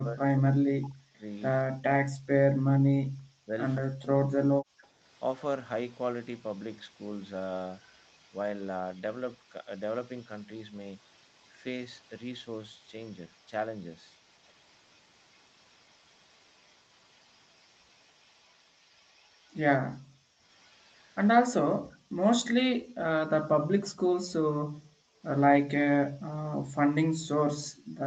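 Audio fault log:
0.00–4.72 s, speech suppressed in double talk: With both ends talking at once, the echo canceller likely could not tell the near talker from the loudspeaker echo and turned everything down together. The speech dips sharply and in patches, at its deepest by around 40 dB, and about three seconds of this stretch are affected in total. The voice thins out or breaks up in pieces rather than fading evenly.
0.81–1.63 s, 4.82–19.58 s, 20.51–21.28 s and 25.33–25.43 s, echo leak: One side is likely playing the call over a loudspeaker, and its canceller let part of that pickup return down the line. A copy of the speech comes back 192 ms late. In the first burst it sits roughly 25 dB below the direct speech. In the later stretches it is fainter, around 35 to 40 dB down.
20.03–20.40 s and 21.74–25.19 s, background gated by the echo canceller: While the loudspeaker signal was active, the canceller clamped the microphone hard instead of subtracting only the echo. 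The room tone drops out, by about 34 dB in the short first gate and about 40 dB in the second, where roughly two seconds are gated in total. The background then snaps back when the canceller releases. The call's microphone processing passes the band up to 8 kHz.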